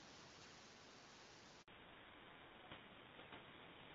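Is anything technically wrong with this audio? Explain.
Yes, two related faults sit in the middle of this speech clip.

Handover gap, 1.62 to 1.68 s: for about 60 ms the sound drops out completely. When a call is passed from one network link to another, no speech frames arrive while the new path is set up, so the speech fades within a few tens of milliseconds and stays silent until audio resumes. Whatever was said in that window is simply missing, leaving a short hole in the speech.

Fallback to narrowband, from 1.68 s to the end: up to the gap, the speech carries the airy high band of HD Voice, lightly coded by AMR-WB at 12.65 kbit/s. After the handover, nothing above 4 kHz remains. The new link has dropped to an older narrowband codec, which fits GSM full rate. The sibilants lose their crispness, and the speech turns duller, boxier and rougher for the rest of the clip.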